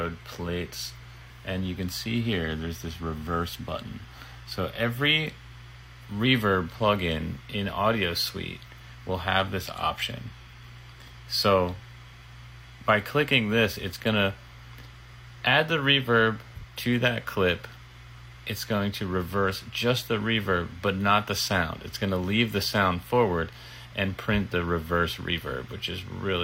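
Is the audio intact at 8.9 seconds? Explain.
No, computer activity noise runs through the whole clip, so it's there at 8.9 s too: a faint chirpy buzz around 1 kHz, roughly 35 dB down, from the computer's load changes shifting the shared ground.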